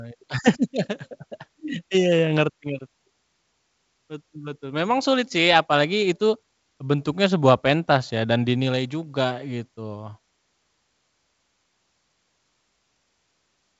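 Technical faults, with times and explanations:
No technical faults can be heard in this speech. The sound stops at about 7.7 kHz, with at most faint coding damage, which fits G.722 wideband telephone coding at its full 64 kbit/s rate.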